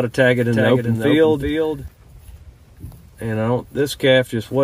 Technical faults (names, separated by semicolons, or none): doubled audio track